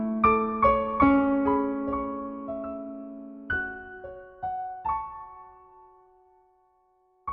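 Nothing in the signal points to a technical fault at any moment.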